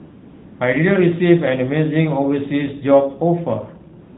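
From 0.0 to 0.6 s, before the speech begins, the background is AMR comfort noise. No speech frames were sent, so the receiver made a smooth, steady synthetic hiss. It stands in for the real room sound. At 4.02 s it returns and runs to the end. The narrowband mobile codec carrying the speech adds only light damage.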